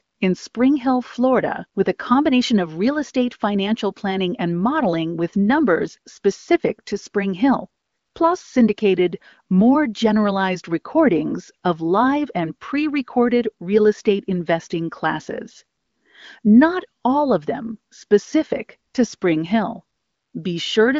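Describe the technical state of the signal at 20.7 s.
At 20.7 s the signal is intact, with the speech carried cleanly through the AMR wideband (HD Voice) coding at 23.05 kbit/s and its content ending near 7.4 kHz.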